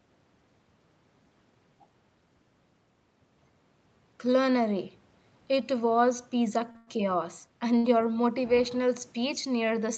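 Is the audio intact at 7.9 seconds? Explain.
Yes, no sound is lost at 7.9 s. A short stall from a late packet ends just before, running from 7.78 to 7.86 s, right before "your motivational". A packet arrived about 60 ms late, the jitter buffer ran dry, and the receiver stretched the last sound to fill the gap. Playback then resumed from the same point, so that sound is held slightly too long, with a faint buzz or dip, and nothing is missing.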